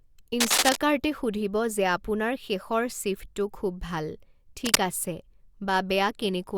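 A speech clip marred by two bursts of cable scratch noise, from 0.40 to 0.76 s and from 4.65 to 4.81 s, each about 5 dB above the speech. Unlike isolated clicks, these are dense, ragged rustles, likely from a worn cable or connector being moved.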